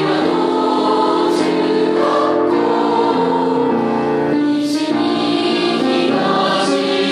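No technical faults can be heard anywhere in the audio. Nothing breaks up, drops out or changes character at any point.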